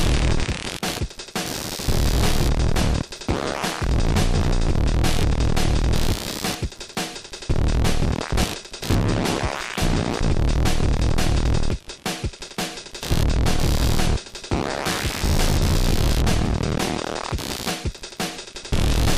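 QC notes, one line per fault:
throughout, computer activity noise: shifting load from the processor, graphics or pointer drags the ground the audio circuit shares with the computer, so that activity leaks into the signal path. It is heard as a buzzy, chirping pulsing at roughly 70 Hz, sitting some 15 dB under the sound, and it rises and falls with what the machine is doing rather than with anything in the sound itself.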